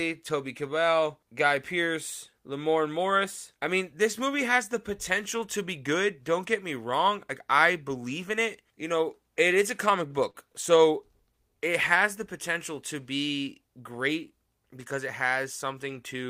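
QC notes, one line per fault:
10.30 to 10.36 s and 10.52 to 10.56 s, short stall from a late packet: right after "it is a comic", the sound briefly hangs. The jitter buffer ran dry, so the receiver stretched the last sound, by about 40 ms and then 21 ms, until the late packet arrived, and playback resumed from the same place. Unlike packet loss, nothing is cut. Everything after the held sound plays slightly later.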